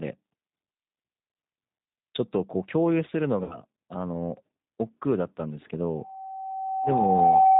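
The whole clip passes through the G.729 codec at 8 kbit/s, most likely the lighter G.729A variant. The speech is rebuilt from a vocal tract filter, a pitch predictor and a few pulses per frame. Nothing above 4 kHz survives. The damage is plainly audible. Voices sound rough, thin and slightly synthetic. Consonants lose their crispness.

From 3.44 to 3.60 s, there is VoIP packet loss concealed by the speech codec. About 60 ms of audio went missing, which fits two lost packets. The decoder filled the gap by extending its last pitch and filter settings. It lowered the gain with each frame. The sound smears into a buzzy tone or coloured noise that fades. Because each frame depends on the one before, the speech stays weak and distorted briefly after the audio returns.

At 5.96 s, a loudspeaker feedback squeal begins and lasts to the end. A microphone is picking up the speaker it feeds. At 765 Hz the loop gain rises above one, so that frequency feeds on itself. 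The single tone swells over roughly a second and a half. It ends up around 10 dB louder than the speech and dominates the final stretch.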